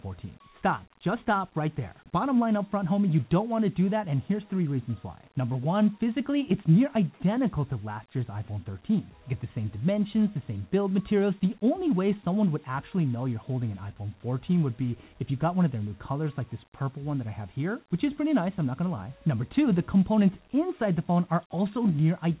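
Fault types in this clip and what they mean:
No faults can be heard in this clip.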